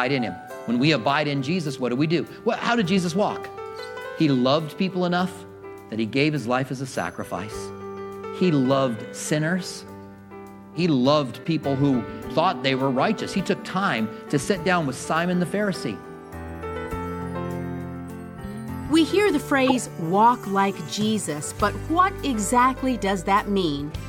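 Corrupt frames decoded at 3.77–3.80 s, 11.44–11.46 s and 19.67–19.72 s. In each, damaged bits in the compressed stream were played as if valid, so misread gains and codes scattered energy into the wrong frequencies for the span of the affected frames. The first two are faint glitches peaking near -35 dBFS. The third, across a few frames, is a sharp, much louder glitch peaking near -5 dBFS.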